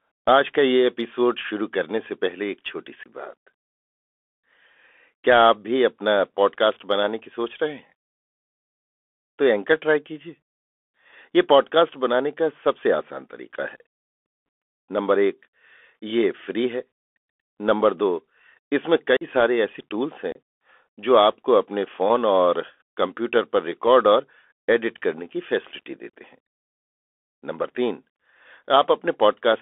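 From the start, the speech carries the Bluetooth CVSD headset codec: the band runs only from about 250 Hz to 3.4 kHz, which fits a 64 kbit/s CVSD link. The one-bit delta coder's adaptive step lags loud, bright sounds, so sibilants turn scratchy over a constant granular hiss.

Unconcealed Bluetooth headset packet loss cuts four abrupt holes: 3.03 to 3.08 s (22.5 ms lost), 19.17 to 19.24 s (45 ms), 20.32 to 20.36 s (30 ms) and 26.10 to 26.12 s (37.5 ms). Each is roughly seven to ten dropped packets replaced by silence or an idle pattern, leaving abrupt edges and a brief quiet recovery.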